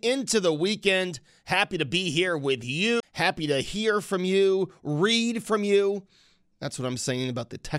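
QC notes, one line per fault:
3.00–3.03 s, CD skip: just after "to be here with", a mute of about 30 ms as the laser jumps to another turn of the spiral. Unlike a plain dropout, the speech resumes from a different point rather than where it stopped.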